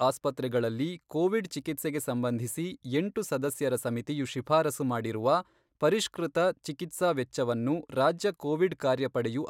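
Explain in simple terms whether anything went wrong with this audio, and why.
Nothing went wrong with this speech recording. There are no technical faults anywhere in it, so there are no moments to point to.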